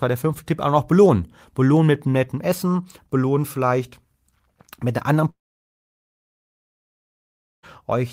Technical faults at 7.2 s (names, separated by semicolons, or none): long network dropout